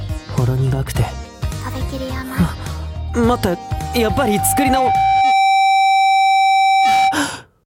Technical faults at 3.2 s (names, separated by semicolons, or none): loudspeaker feedback squeal